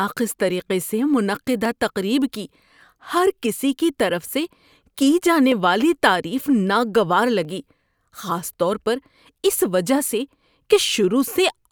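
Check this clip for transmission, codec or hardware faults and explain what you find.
Clock drift buffer slips run from 0.69 to 11.31 s: around ten regular clicks through the speech, every 0.97 s. The likely cause is two mismatched clocks drifting a few hundred ppm apart, so a small block of samples is periodically dropped or repeated.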